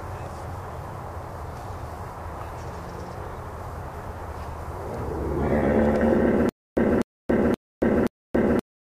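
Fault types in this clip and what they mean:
stutter with silent gaps: from 6.49 s to the end, a 247 ms burst repeats four times, each followed by 278 ms of silence, every 526 ms. The playback likely stalled, replaying its last fragment at each retry, so the audio due there is lost.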